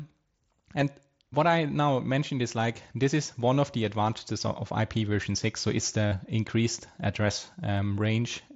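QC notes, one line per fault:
6.08 to 6.12 s, concealed Bluetooth headset packet loss: about 37.5 ms of the speech went missing over the link and the receiver filled it by repeating the best-matching recent stretch of waveform, so a brief buzzy tone replaces the sound, seen as evenly repeated cycles on the waveform and flat, smeared harmonics on a spectrogram, with a slight warble as real audio resumes.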